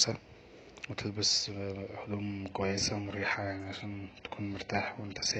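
A speech clip that switches to an adaptive stream at a lower bitrate at 2.50 s and stays there to the end at 5.39 s. The treble suddenly thins and turns synthetic, fitting a very low-bitrate HE-AAC rendition. Unlike a dropout, there is no gap.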